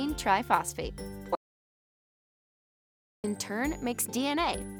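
At 1.35 s the sound cuts off abruptly into complete silence, with no room tone, and resumes mid-flow at 3.24 s, so 1.89 s of material is gone. This audio dropout to silence likely comes from the input failing while the recorder kept writing silence.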